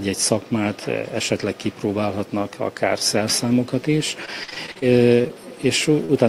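From 4.25 to 4.84 s the sound turns choppy and stuttering, with small pieces dropping out. This is repeated packet loss: seven separate holes, the longest about 43 ms and together around 180 ms, arrived too late or not at all. Each hole was papered over by stretching the last received sound, so roughly a third of that half-second is synthetic fill rather than real audio.

Shortly after, three brief blips follow: a brief smear at 5.22 to 5.26 s, another at 5.28 to 5.31 s, and a slightly longer wobble at 6.05 to 6.11 s. Each is short concealed packet loss, with about 20 ms, 20 ms and 40 ms of audio missing. The decoder briefly extended the preceding sound to bridge each gap before blending back into the real signal.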